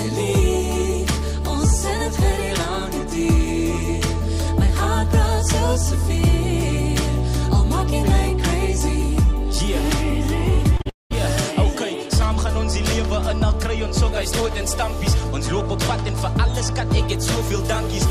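The audio has two short concealed packet losses at 10.77–10.82 s and 10.82–10.87 s, each a brief smear where about 20 ms and then 40 ms were patched from the preceding sound before real audio resumed. At 10.89–11.12 s a likely long network dropout follows. Unlike those quick smears, the continued sound fades, roughly 0.17 s of silence remains, and the lost stretch never returns.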